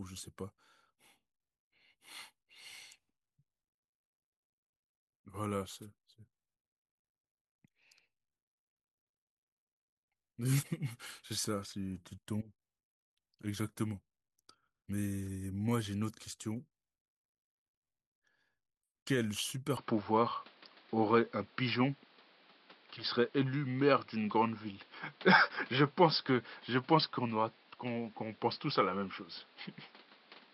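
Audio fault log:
19.77 to 30.53 s, input switched to a poorer device: with no gap, the sound turns duller and boxier, energy stops above 5.4 kHz like a flat ceiling on the spectrogram, the waveform shifts about 5 dB in level, and a new noise floor appears roughly 30 dB down, likely from a narrower-band input taking over.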